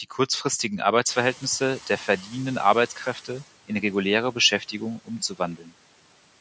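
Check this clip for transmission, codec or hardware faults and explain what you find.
One fault shows up: the noise suppressor catching up. From 1.07 s to 3.44 s, a sudden jump in background noise, rising about 24 dB at around 1 s, comes through only lightly reduced, then gradually sinks over roughly 2.4 s until it sits about 9 dB lower. The suppressor tracks an estimate of the steady noise floor, and when the room noise stepped up abruptly that estimate lagged, so the extra noise was briefly treated as wanted sound. The room noise itself, settling about 24 dB below the speech, belongs to the recording, and the call microphone processing's band limit, with nothing above 8 kHz, is normal.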